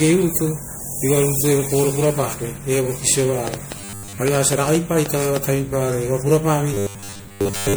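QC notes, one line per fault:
Throughout: generation loss. The speech sounds swirly, hollow and smeared, with blurred attacks. This is likely from several rounds of MP3 coding near 96 kbit/s.
3.48 to 5.37 s: train of clicks. About ten similar pops arrive unevenly, around five per second, about 10 dB above the speech. This is likely interference.
3.79 to 4.18 s and 6.74 to 7.77 s: robotic sound from repeated short buffers. A rigid 100 Hz metallic buzz replaces most of the speech, likely from repeating 10 ms buffers.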